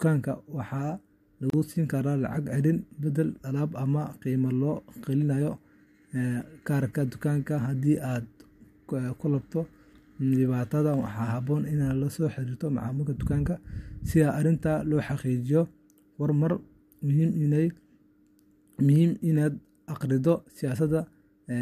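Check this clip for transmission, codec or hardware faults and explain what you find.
One fault: a gap at a join of encoded pieces, at 1.50 s, just before "siin karaa". The speech was encoded in separate pieces and then joined untrimmed, so one run's padded final frame and the next run's start-up delay both remained. That leaves a 34 ms gap in the middle of continuous speech, with abrupt edges softened by the codec so the truly silent part is shorter, after which the speech resumes exactly where it left off.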